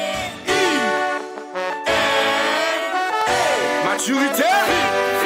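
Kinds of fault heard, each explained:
Clock drift buffer slips: a regular click recurs about every 0.75 s from 0.22 to 4.71 s, roughly seven in all, each a tiny jump of a few samples. Likely two devices with clocks about 200 ppm apart, slipping at a steady interval, unlike random dropouts.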